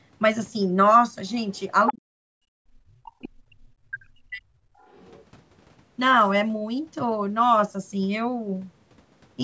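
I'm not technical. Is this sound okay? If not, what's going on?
No. There is other side's voice leaking through: brief scraps of a second voice at 1.55–1.6 s (faint), 1.87–1.92 s (almost as loud), and 4.79–5.25 s (faint), likely loudspeaker echo the call didn't cancel. Unlike a dropout, this is extra sound added on top. From 1.91 to 4.51 s there is speech suppressed in double talk: for about two seconds in total the main voice dips to almost nothing, in pieces. This is likely the call system muting both sides during overlap, which is different from the line simply going silent.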